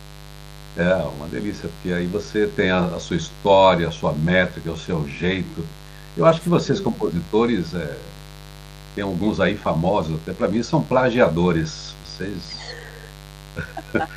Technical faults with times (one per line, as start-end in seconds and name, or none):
0.00-14.16 mains buzz